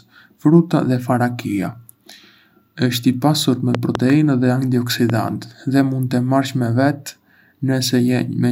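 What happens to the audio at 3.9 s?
A loud pop hits between 3.75 and 3.97 s. Two sharp pops sit on top of the speech, peaking roughly 15 dB above it. The speech carries on underneath. A sudden voltage pulse, likely from a plug, switch or static discharge, was added to the signal.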